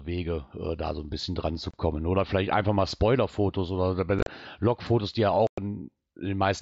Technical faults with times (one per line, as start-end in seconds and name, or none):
1.71-1.74 unconcealed Bluetooth headset packet loss
4.19-4.28 unconcealed Bluetooth headset packet loss
5.47-5.58 unconcealed Bluetooth headset packet loss